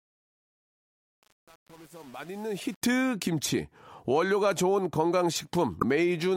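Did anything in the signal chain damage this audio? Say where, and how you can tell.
Yes. From 0.00 to 2.82 s the fade sounds grainy and coarse throughout. This is truncation distortion on a fade, introduced at the gain or sample-format stage. The fade was computed with too few bits and no dither, so low levels collapse onto a handful of square steps. The coarseness suggests roughly a 7-bit word. The distortion ends at 2.82 s.

A second fault is a short disruption from 5.79 to 5.83 s, about 40 ms long, where the sound briefly jumps and garbles. The likely cause is a broken MP3 bit reservoir in the codec or storage stage. When frames are cut from an MP3 stream, the next frame reaches back for borrowed data and decodes the wrong bytes, producing a brief burst or gap. The span is consistent with one or two frames of about 26 ms.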